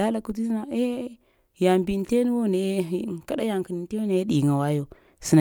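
Nothing in the speech stood out as a technical problem on listening.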